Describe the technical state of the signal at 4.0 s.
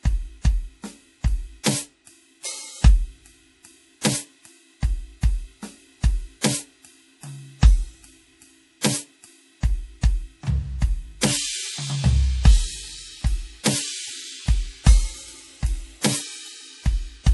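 A short burst of pre-echo runs from 4.01 to 4.05 s, spreading about 36 ms ahead of a sharp attack in the music. The codec spreads its quantisation error across a whole transform block, so noise meant to be masked by the loud hit also spills into the quiet moment before it. It is heard as a brief hiss leading into a softened, smeared onset. On a waveform, a low fuzzy ramp precedes the transient; a spectrogram shows a faint broadband smear just left of the attack's vertical stripe.

Around that moment the music also carries plainly audible damage that is likely MP3 compression, consistent with a bitrate around 48 kbps. The encoder has cut everything above 11.5 kHz and drops weak frequency lines in and out between frames, giving a watery, swirling texture and metallic chirps on bright content. A spectrogram shows a hard horizontal ceiling at 11.5 kHz, with patchy, flickering holes in the upper bands below it.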